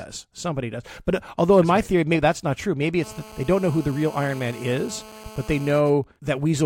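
From 3.03 to 5.79 s, GSM phone buzz appears: a nearby 2G handset on a call pulses at 217 Hz, rectified into a raspy, harmonic-rich buzz about 20 dB below the speech. From 5.80 to 6.52 s it turns into GSM signalling bursts, an even, slightly quieter pattern of ticks with a longer 217 Hz buzz twice a second as the call's talker falls silent.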